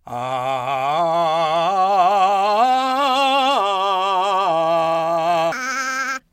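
Audio read two samples at a time (double speed) affects this music clip from 5.52 s to 6.32 s. Over that final stretch the playback treats each pair of samples as a single frame, as though the data held two channels or samples twice as wide. The music therefore runs at 2x speed and jumps up 12 semitones, a full octave.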